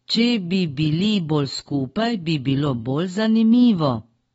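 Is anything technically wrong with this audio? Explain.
Yes. Throughout the speech, the likely cause is AAC compression at a low bitrate, suggesting around 24 kbps. The encoder discards content above about 7.7 kHz and coarsely quantises what remains, so the sound is dull and smeared, with plainly audible warbling, fizzy artefacts.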